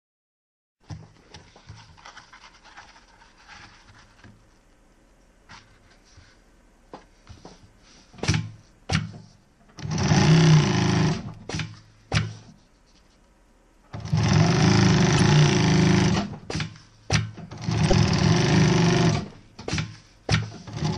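At 12.23–12.25 s, 15.17–15.20 s and 17.90–17.92 s, a corrupt frame was decoded: damaged bits gave misplaced energy, heard as short chirps, squeaks, blips or bursts of noise. The first is faint; the later two are louder, the last the strongest, showing as brief vertical smears on a spectrogram and waveform spikes.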